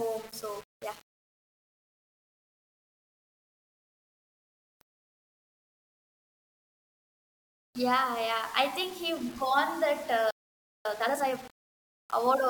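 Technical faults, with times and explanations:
Throughout, low bit depth without dither. The speech has a grainy, gritty edge that shifts with the voice. The grain fits about 6 bits, rounded with no dither. The error sits roughly 25 dB below the signal and follows it, so quiet passages sound roughest.
10.31 to 10.85 s, playback stall. The speech cuts to silence mid-flow for about 0.54 s. The likely cause is the player running out of data or its thread being blocked. Output stops until it recovers, then resumes.
10.85 to 11.39 s, time-compressed catch-up. Right after the gap, the speech rushes at twice normal speed. Pitch stays normal. The player is cutting small pieces and cross-fading them to clear its backlog.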